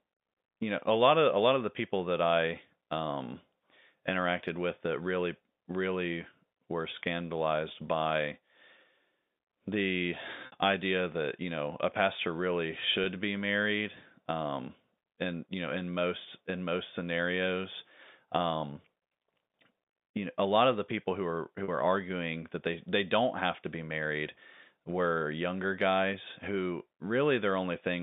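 Speech over a G.711 telephone line with packet loss with pitch repetition: dropped packets were bridged by repeating the last pitch period, giving a fade into silence at 10.46–10.52 s (60 ms, before "idea that you know") and brief buzzy held tones at 13.04–13.06 s (after "know a pastor really") and 21.64–21.68 s (after "the people who are").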